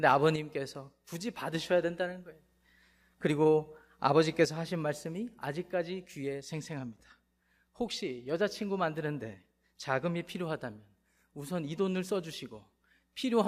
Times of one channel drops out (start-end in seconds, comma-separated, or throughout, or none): 0.36-1.54, 4.45-13.48